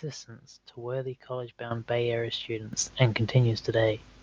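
At 1.71 s the level of the whole signal jumps by about 10 dB in a single step, and at 2.73 s it jumps again by about 8 dB. Both are microphone volume stepped up events: the call software judged the input too quiet and raised the device's input gain at once rather than ramping it. Because the change happens before any processing, speech and background noise rise together, so the room sound lifts abruptly along with the voice.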